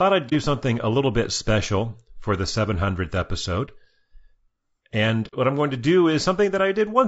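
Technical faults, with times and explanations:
Throughout, low-delay AAC compression: the sound is rough and grainy, with noise filling the gaps between harmonics and a thin, synthetic top band. This is likely the short-frame AAC-ELD codec used for calls, which cannot resolve pitch finely at a bitrate around 32 kbps.
0.29–0.33 s, 3.65–3.70 s and 5.27–5.34 s, AAC frame loss with muting: brief soft-edged holes, just before "something a little bit" and "what I'm going to". The decoder zeroed the missing spectrum and the overlapping windows faded the sound out and back in. The first two gaps fit one lost 30 ms frame each, and the longer third gap fits two.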